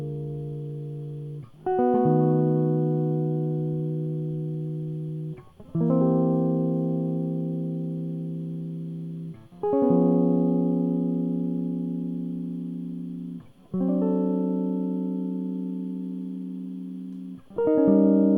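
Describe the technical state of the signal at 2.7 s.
At 2.7 s the music plays through intact, with no dropout, distortion or other fault in the signal at that moment.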